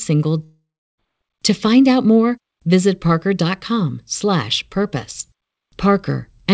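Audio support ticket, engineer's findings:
Long network dropout at 0.44–1.00 s. Speech breaks off and is replaced by a buzzy continuation of the last sound that fades to silence; the final 0.35 s is dead quiet. Likely cause: jitter buffer starved, concealment exhausted. Unlike a brief packet-loss glitch, the gap lasts over half a second. Unlike a mute, it fades rather than cutting. Speech resumes with that stretch missing, not delayed. G.722 band limit at 8 kHz is present throughout.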